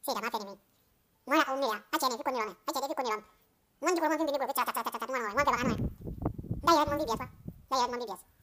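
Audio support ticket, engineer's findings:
Speech runs at double speed throughout, pitch up 12 semitones, a full octave. Audio read two samples at a time: the reader treats sample pairs as single frames, a likely mono/stereo or sample-width mismatch. Spectrogram shows formants shifted upward; waveform looks compressed in time.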